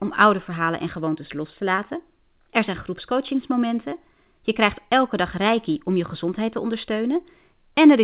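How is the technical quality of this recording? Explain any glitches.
Two brief glitches come from short concealed packet loss, heard over a call path whose band stops at 4 kHz, which fits G.711 mu-law telephony. The first runs from 1.76 to 1.80 s, just after "en gewoontes los te", and the second from 3.90 to 3.94 s. In each, about 20 ms of audio arrived too late, and the receiver extended the preceding sound to bridge the gap before blending back. This gives a short smear or wobble rather than silence, which distinguishes it from a plain dropout.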